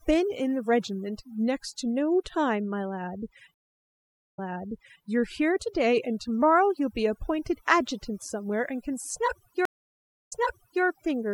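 A noise reduction stage set far too aggressively runs through the whole speech clip. This is overdone noise removal. Any frequency band that comes close to the tool's noise estimate gets pushed down hard or cut out entirely, and the quieter parts of the voice are taken along with the noise. The background drops and breaks up into twinkling specks.

At 3.54 s a stream reconnect occurs. The connection dropped, the player stalled for about 0.81 s, then reconnected and restarted its decoder partway into the stream. The server resent a chunk of audio, so playback picks up about 0.68 s earlier than where it broke off, and listeners hear that stretch a second time before the clip moves on, around 5.03 s.

A second stream reconnect begins at 9.65 s. This silence lasts about 0.63 s, and playback resumes about 0.55 s earlier than where it stopped, repeating that short stretch before the disturbance clears at roughly 10.84 s.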